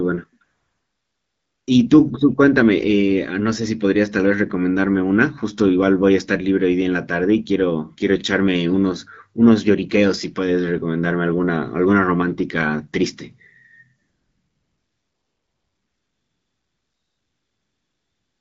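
Speech over an AMR wideband link, with AMR comfort noise from 0.43 to 1.67 s and again from 14.01 s to the end: speech frames stopped during pauses, and the real background gave way to steady, smooth synthetic noise.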